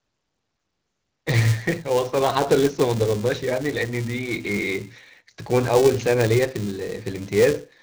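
From start to finish the speech goes through the AMR wideband (HD Voice) codec at a low rate, about 8.85 kbit/s, so it sounds rough and raspy, with nothing above 7 kHz. Also running the whole way is a filter restarted on every block: it drops its state at each block boundary, leaving a steady 375 Hz buzz that rises and falls with the speech level, which fits a 128-sample block.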